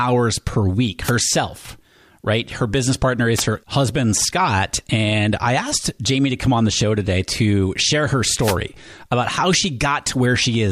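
Wireless microphone noise hits the speech at 1.03 to 1.11 s, 3.35 to 3.43 s, and 8.40 to 8.57 s. The FM radio link fades, so receiver noise rises as brief swishes of static.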